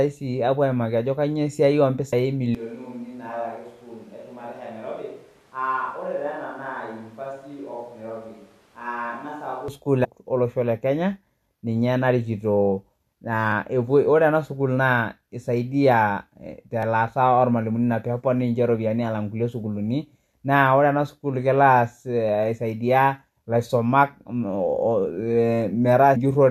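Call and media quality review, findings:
Damaged data in a compressed stream at 2.12 s, 10.03–10.06 s and 26.15 s: brief chirp, squawk or click as the decoder loses frame sync and resyncs on the next header.

Switch to a distant microphone, 2.55–9.68 s: sudden change to roomy, hollow, thin sound, roughly 10 dB quieter, with room noise only about 25 dB below the signal. Likely close-mic signal lost and a far pickup used. Abrupt both ways, not a gradual drift in level.

Block of digital silence at 16.83 s: single tick from a 1 ms hole, hard edges, no fade. Points to an output buffer not filled in time. No chirp or skip ahead, unlike the compressed-stream damage.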